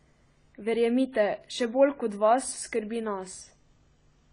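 From start to finish the speech sounds dull and smeared, with nothing above 10 kHz and a warbling, fizzy texture on sibilants. This is likely AAC compression, an AAC-LC encoder starved of bits, which fits a bitrate around 24 kbps, lowering the cut-off and thinning bands.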